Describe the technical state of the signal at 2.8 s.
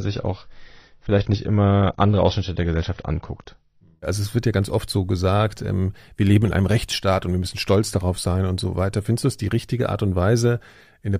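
At 2.8 s the speech is still in the opening low-bitrate stretch of an adaptive stream, which lasts from 0.0 to 4.0 s. The player began on a lean version to start quickly, and the dull, band-limited sound, with nothing above 6.4 kHz and heavier codec artefacts, points to roughly 24 kbit/s AAC before the clean step up.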